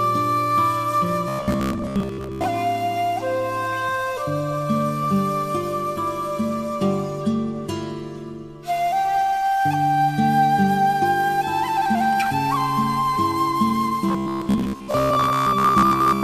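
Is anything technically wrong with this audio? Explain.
Yes. From 1.28 to 2.44 s and 14.09 to 16.23 s there is robotic sound from repeated short buffers: a rigid 66.7 Hz metallic buzz, likely from a roughly 15 ms chunk replayed for most of each span.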